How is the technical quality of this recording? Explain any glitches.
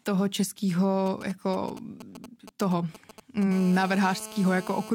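The recording is compromised by radio interference from a 2G mobile phone close to the recording chain. It appears in two forms that run almost back to back through most of the speech.

From 1.06 to 3.44 s there are GSM signalling bursts. The phone is exchanging short groups of transmissions with the network, and the audio circuitry rectifies those radio pulses into sound. The result is a galloping dit-dit-dit of brief 217 Hz buzzes, sitting roughly 15 dB below the speech. On a waveform these show as irregular clusters of sharp spikes. A spectrogram shows short vertical blocks with a comb of harmonics stacked on 217 Hz.

From 3.51 to 4.90 s the pattern changes to GSM phone buzz, consistent with the phone entering an active call and transmitting continuously at 217 bursts per second. The rectified pulses now form a hard, raspy, unbroken buzz at about 17 dB below the speech, unrelated to anything being said. 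In a spectrogram this appears as evenly spaced horizontal lines at 217 Hz and its multiples, running the whole span. On a waveform it looks like a dense, regular pulse train.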